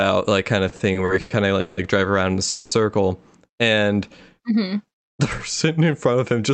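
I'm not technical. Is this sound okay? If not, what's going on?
No. Four short problems are audible in this speech.

From 0.69 to 1.79 s, right after "like kind", the speech stutters and drags in six little hitches. This is repeated stalls (stutter): the data carrying the call kept arriving late, so the receiver stretched the last sound to fill the waits, about 0.38 s in total, the longest 0.17 s. Nothing is lost.

From 2.49 to 2.73 s, just after "drive around in a", the sound hangs as a fading buzz or hiss for about 0.22 s before carrying on. This is a call audio freeze. The likely cause is that the data was held up in transit, leaving the receiver nothing new to play, so it held the last sound until delivery resumed.

From 3.52 to 3.94 s, the speech slows to about 91% speed without dropping in pitch, so sounds seem slightly drawn out. This is a jitter buffer slow-down: its reserve of incoming audio ran low, so it repeated tiny pieces, adding 45 ms, to rebuild the cushion.

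From 5.81 to 6.50 s, the speech runs at about 109% speed, sounding a little rushed at normal pitch. This is a jitter buffer speed-up: audio had piled up, so the receiver trimmed out tiny pieces, about 70 ms altogether, to catch up.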